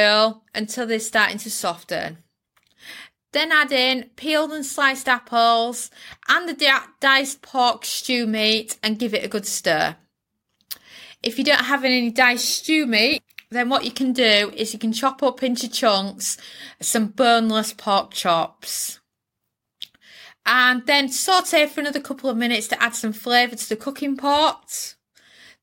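No technical faults can be heard anywhere in the recording.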